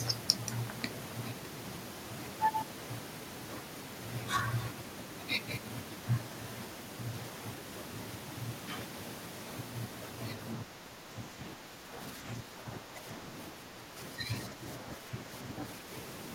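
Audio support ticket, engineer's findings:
Speech suppressed in double talk at 10.65–13.05 s, 13.53–13.97 s, 14.16–14.30 s and 14.54–15.29 s. Level dips of about 5 dB, about 10 dB at 13.53–13.97 s. Waveform envelope notches. Likely echo canceller/suppressor attenuating near-end speech under overlapping far-end talk.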